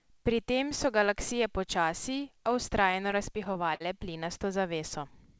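Late-arriving packets repeatedly emptied the jitter buffer from 2.92 to 3.82 s, causing repeated stalls (stutter): six gaps up to 53 ms, filled with continued sound, so it drags and stutters.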